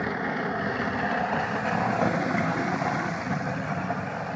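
No faults found; the only processing audible is the call microphone chain, whose high-pass trims the lowest bass and whose bandwidth stops at 8 kHz, both normal for that path.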